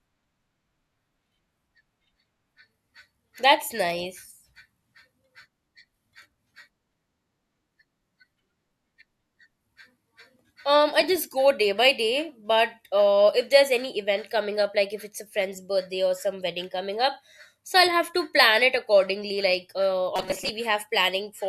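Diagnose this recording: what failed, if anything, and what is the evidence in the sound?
From 20.16 to 20.49 s the speech turns into a rigid metallic buzz at 188 Hz: robotic sound from repeated short buffers. About half the audio is replaced by repeats, likely a driver or buffer underrun looping a roughly 5 ms block while real audio is dropped.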